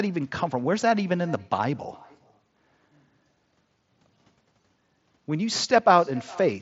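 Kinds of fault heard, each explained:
Echo with no canceller: The far end is playing the call through a loudspeaker, its microphone picks that sound back up, and nothing at that end strips it out, so the speech returns to you after the network round trip. Here every phrase trails a faint, thin copy of itself roughly 0.4 s behind, sitting about 25 dB below the direct speech, under the headset's band-limited sound, which tops out near 7.7 kHz.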